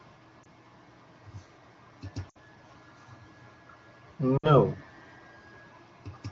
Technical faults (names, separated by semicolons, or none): lost AMR speech frames